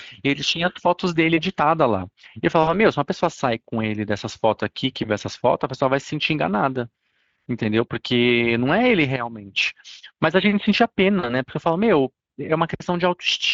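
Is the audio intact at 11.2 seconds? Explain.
No. From 11.19 to 11.36 s the speech smears into a buzzy tone or a fading coloured noise: VoIP packet loss concealed by the speech codec. The decoder extrapolated across a 40 ms gap, which fits two lost frames, and stayed weak or distorted afterward. Throughout, including here, Speex codec damage is plainly audible, consistent with a setting around 20 kbps.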